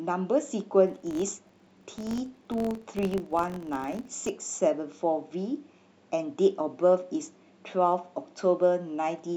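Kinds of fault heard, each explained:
Filter restarted on every block: from 0.88 to 4.31 s a filter loses its state at each block boundary, so every block starts with a small transient, giving a level-following buzz at about 46.9 Hz that fits 1024-sample blocks.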